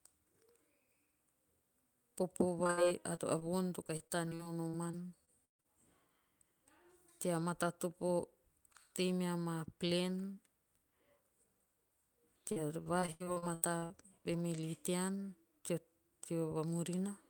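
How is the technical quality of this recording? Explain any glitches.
The recording has clear network damage: audio packets failed to arrive in time on the call, and the receiver's attempts to cover the holes can be heard in several places.

Short concealed packet loss occurs at 2.63, 2.67, 3.15 and 3.39 s, the last just before "voon to". Each time about 20 ms of audio never reached the decoder. The receiver extended the preceding sound to fill the hole and then blended back into the real signal. Each one is heard as a tiny smear or wobble, and the first two run straight into the next fault.

A burst of packet loss follows from 2.71 to 2.79 s. About 60 ms went missing in one run, too long to hide cleanly. The receiver kept stretching the last sound while fading it down, so that moment is briefly held and dwindles away. The audio then resumes a little further on, with the stretch in between gone.

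Repeated packet loss with a robotic sound covers 3.87 to 5.66 s, starting right after "voon to", and 12.52 to 13.92 s. The connection dropped packets again and again: about a dozen gaps totalling roughly 420 ms in the first stretch, with the longest 136 ms, and 11 gaps totalling about 440 ms in the second, with the longest 81 ms. Roughly a quarter and a third of each stretch is patched audio. The constant filling makes the sound choppy, with fragments missing.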